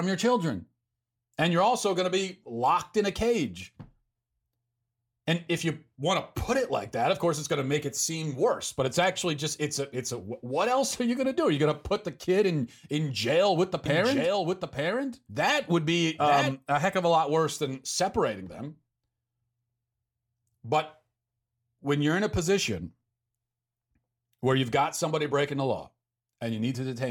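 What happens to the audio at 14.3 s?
At 14.3 s the speech is inside a doubled audio track that runs from 13.86 s, just after "in jail with the", to 16.52 s, just before "a heck of a". A second full-band copy trails the original by about one second at roughly 5 dB lower, with no reverb tail. It is likely a second, slower capture path mixed in. On a spectrogram the same harmonic patterns repeat a second later, and the waveform shows the overlap beginning and ending with hard edges.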